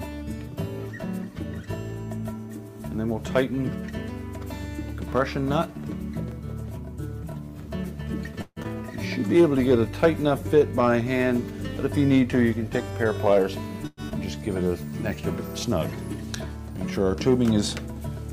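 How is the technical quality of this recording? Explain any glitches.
The recording has several network-related glitches, all between about 8 and 15 seconds.

At 8.41 to 8.67 s there is a long network dropout. No audio likely arrived, so the receiver extended the last sound as a fading buzz for about 230 ms, then about 40 ms of near silence. Roughly 120 ms of audio is simply gone when playback resumes.

Jitter buffer slow-down occurs twice. From 9.38 to 10.90 s, the receiver repeated pitch periods to build a reserve, adding 115 ms. The audio plays at 93% speed with unchanged pitch, slightly drawn out. At 14.64 to 14.91 s it runs at 81%, adding 61 ms, so the stretching is more obvious.

From 12.90 to 13.44 s there is a jitter buffer speed-up. The buffer held too much audio, so short pitch-period slices were cut out, about 50 ms in total. The sound runs at 108% speed, a little hurried, with the same pitch.

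A call audio freeze follows at 13.87 to 14.00 s. Packets were likely delayed and the buffer ran dry. The last sound is stretched as a fading buzz for 107 ms, ending in a brief silence. Nothing is lost, since audio resumes where it stopped.

At 14.09 to 14.14 s, playback does a skip ahead. Audio was dropped while later packets were already waiting. About 100 ms is missing. A 17 ms bridge joins the two sides almost directly, so the sound jumps forward abruptly.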